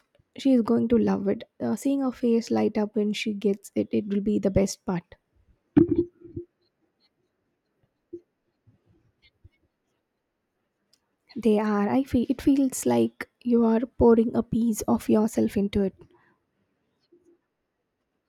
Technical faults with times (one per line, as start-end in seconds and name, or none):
none